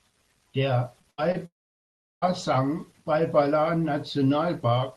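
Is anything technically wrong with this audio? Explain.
Yes, there's a cluster of packet-loss trouble in this speech clip, all packed between about 1.0 and 2.2 seconds. The clip has the slightly band-limited sound of a call codec topping out around 12 kHz, which fits Opus at a modest bitrate.

First, two short concealed packet losses, at 1.01–1.05 s and again at 1.32–1.36 s. Each time roughly 20 ms of audio didn't arrive in time, and the receiver papered over the hole by extending the sound it had just played before easing back into the real signal. You hear a quick smear or tiny wobble, and anything very short in that moment can simply disappear.

Between those sits a burst of packet loss from 1.11 to 1.20 s, about 80 ms gone. Here the gap was long enough that the concealment had to keep stretching the last bit of sound while fading it down. So instead of a blip you get a short held buzz or fading hiss, then the speech picks up further along with that chunk missing.

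The big one is from 1.46 to 2.24 s, where about three quarters of a second drops out, most likely a long network dropout. The concealment carries the last sound only briefly as a dying buzz or hiss, and after that it's essentially silence for around 0.7 s. When the audio returns it's jumped ahead, and the part in between is just lost.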